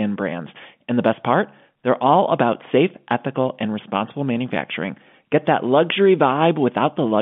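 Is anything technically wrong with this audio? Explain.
No, nothing is technically wrong: the speech arrives as ordinary G.711 telephone coding, with the familiar narrow line band running from about 150 Hz to 3.5 kHz and no damage beyond what that format normally leaves.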